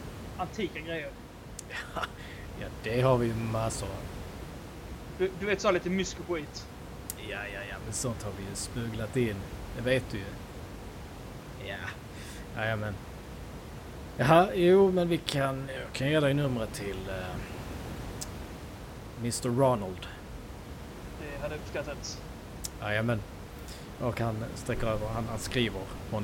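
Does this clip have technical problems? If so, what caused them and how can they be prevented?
Yes. From 15.77 to 16.31 s, just after "jo men vi kan" and right before "numret till", the speech abruptly slows by about 5.8% and sinks roughly a semitone (104 cents) in pitch, then snaps back to normal speed and pitch. This is a drift correction step. The likely cause is clock-matching software that changed the playback rate in one jump to rebalance its buffer, so speed and pitch moved together for about half a second. It can be prevented by having the resampler correct clock drift continuously in very small increments, or by locking both devices to a shared clock so little correction is needed.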